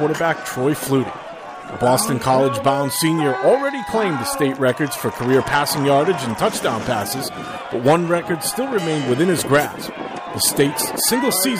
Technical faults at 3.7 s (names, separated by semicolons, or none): none